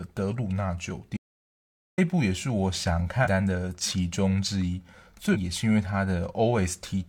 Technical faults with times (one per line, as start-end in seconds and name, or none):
1.17-1.98 audio dropout to silence
3.21-3.27 damaged data in a compressed stream
5.30-5.36 damaged data in a compressed stream